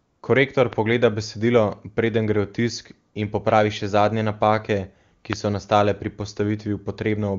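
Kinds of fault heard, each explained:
AMR comfort noise: The phone's voice activity detection judged the talker silent and stopped sending speech frames, so the receiving end filled the gap with synthetic noise built from a rough sketch of the background's level and spectrum. The real background is swapped for a smooth, steady hiss. It happens for the first 0.21 s of the clip, then again as a 20 ms patch at 3.13 s, between "preden gre v tisk" and "in popravi še zadnje".
Loud pop: A sudden voltage step or pulse, likely from a plug, a switch, static discharge or a driver glitch, was added to the signal, and the circuitry after it shaped that pulse into a brief click. Each one is heard as a single sharp pop laid over the sound, which carries on underneath. The first, at 0.73 s, peaks about 10 dB above the signal. The second, at 5.33 s between "še zadnje napake ki" and "so nastale pri", is louder, at about 20 dB.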